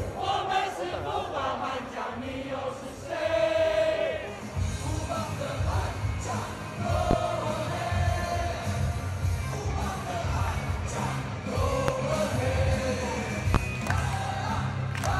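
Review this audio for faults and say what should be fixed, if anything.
Three loud pops occur, at 7.11–7.15 s, 11.88–11.92 s and 13.55–13.58 s. Each is a single sharp pulse lasting under 40 ms and standing some 20 to 25 dB above the surrounding level, while the sound continues beneath it. The likely cause is a voltage step or spike, from a plug, a switch, static discharge or a driver glitch, entering the chain and being shaped into a brief pulse by the circuits downstream. To prevent this, secure connectors, avoid switching during capture, control static, and keep the interface driver stable.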